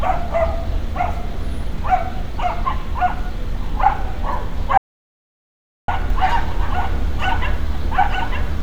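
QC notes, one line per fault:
4.78–5.88 s, audio dropout to silence: the sound cuts off mid-flow and returns about 1.1 s later, and the gap is silent with no background noise. Even ambient room noise would leave some trace, so a gap with no room tone means the input signal itself was missing while recording carried on writing empty samples. The likely cause is a momentary loss of the input, such as a link dropping or a brief mute. Whatever occurred during that second is not recoverable.
6.10 s to end, doubled audio track: from this point a second full-band copy of the sound runs underneath, trailing the original by around a second and sitting about 5 dB lower. It is not an echo, because the copy has no decay or room colouring, and it appears abruptly rather than building up. This likely comes from the same signal being mixed in twice through a slower path, and it continues through to the end of the clip.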